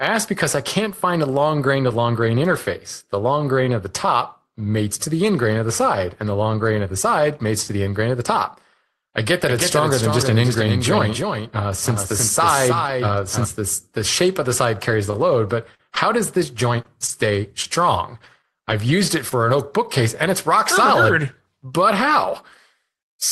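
A speech recording carried over an Opus call path, with its top end stopping at about 12 kHz as a low-bitrate call setting would produce, shows two faults. Right after "the top I get", from 9.47 to 13.45 s, a doubled audio track appears: a second full-band copy of the speech runs roughly 300 ms behind and about 5 dB quieter. This is likely a second capture through a slower path. It has no reverberant tail or room colouring, and it switches on and off abruptly, ending just before "this the shape of". On a spectrogram, each syllable's harmonic pattern repeats as a fainter twin shifted right by about a third of a second. The waveform shows a hard-edged block of thickened, overlapping envelopes. After "shape of the side", between 14.91 and 19.33 s, there are scattered short gaps, about seven of them, with the longest roughly 40 ms. The receiver bridged each lost packet by extending the preceding sound, adding up to around 150 ms of concealed audio. 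These are heard as small ticks and smeared hiccups before "an oak bookcase and". In a spectrogram they appear as brief stretches of frozen, horizontally smeared harmonics. The waveform shows short, unnaturally periodic segments at each patch.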